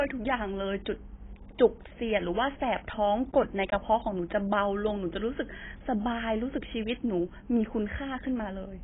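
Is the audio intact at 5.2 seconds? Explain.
No. At 5.2 seconds, as throughout the speech, nothing reaches above 3.8 kHz and the sound is heavily smeared and dull. The likely cause is AAC compression at a very low rate, near 16 kbps. AAC-LC drops bands it cannot afford to code, so a spectrogram shows a flat ceiling at 3.8 kHz.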